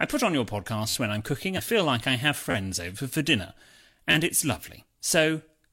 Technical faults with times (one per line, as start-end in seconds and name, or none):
0.89-0.94 repeated buffer
1.54-1.60 damaged data in a compressed stream
2.51-2.54 repeated buffer
4.11-4.14 repeated buffer